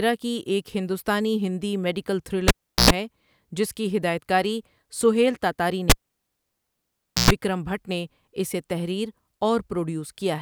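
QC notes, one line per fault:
2.48–2.91 s and 5.90–7.31 s, cable pulled and plugged in: a pop, then near silence for 0.37 s and 1.36 s, then about 0.1 s of 60 Hz mains buzz as the plug tip touches, and a second pop. The buzz and pops set it apart from a plain dropout.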